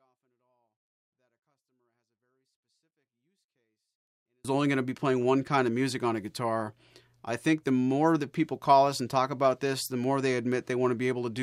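A speech clip whose first 4.45 s shows a 24-bit alignment error (too quiet): 24-bit samples sitting in the low bytes of 32-bit words are read as full 32-bit integers, so the clean signal plays about 48 dB down, nearly inaudible, until "only going to be".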